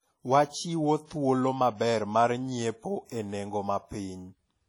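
Speech clip with heavy transform-codec damage throughout: ringing, washy texture and hiss that breathes with the signal, likely WMA compression at a low bitrate around 32 kbps, with nothing above 19.3 kHz. A pre-echo runs from 1.06 to 1.09 s, where quantisation noise spreads about 32 ms ahead of an attack, so a short hiss precedes it and softens its onset.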